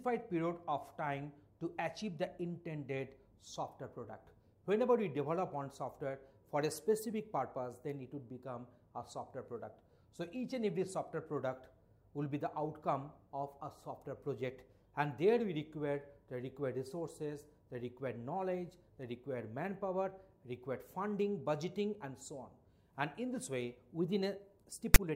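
At 24.94 s, file tags played as audio: text metadata read as samples gives a brief, loud rasp, seen as a hard-edged, DC-offset waveform block and broadband spectrogram stripe.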